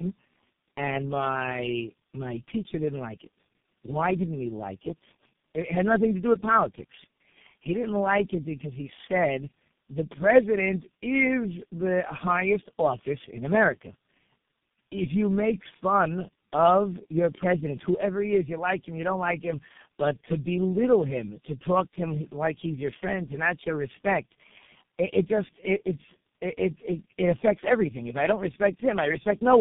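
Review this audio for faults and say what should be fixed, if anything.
Tandem speech coding throughout: three speech coders in a row each re-code the last one's output. Speech turns rough, muffled and warbly; the spectrogram is empty above 3.6 kHz. Prevent it by routing the call transcoder-free, so one coded stream passes end to end.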